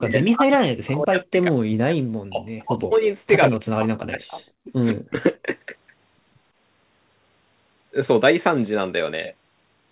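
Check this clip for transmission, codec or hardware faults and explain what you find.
The speech drops out repeatedly during its first five seconds, within a band that stops near 4 kHz, as expected from a narrowband telephone codec.

Speech suppressed in double talk occurs at 0.02–2.04 s, 2.23–2.43 s, 2.61–3.06 s, 3.49–4.7 s and 4.91–5.2 s, where the voice sinks by roughly 40 dB or breaks into fragments. The likely cause is an echo canceller that, with both sides talking, couldn't separate the talker from loudspeaker echo and attenuated both. The waveform envelope collapses in blocks, and the spectrogram goes nearly blank across those stretches.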